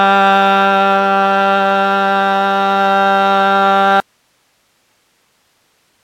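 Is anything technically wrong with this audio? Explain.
Yes. At 4.00 s the sound suffers an audio dropout to a faint residue, and it never recovers before the end. The wanted signal cuts out abruptly, leaving only hiss some 50 dB below the previous level. The likely cause is a break upstream while the rest of the chain stayed powered and live. On a waveform the envelope collapses to a thin flat band at that instant; a spectrogram shows structured energy vanishing into uniform, low-level broadband noise.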